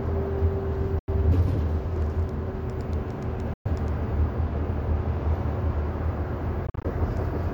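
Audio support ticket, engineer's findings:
Three abrupt silent gaps, sound resuming further on as if it kept playing: 0.99–1.09 s (about 87 ms), 3.53–3.66 s (about 116 ms), 6.67–6.85 s (broken gaps totalling about 102 ms, longest 44 ms). Likely Bluetooth dropout. Late packets dropped at the headphones.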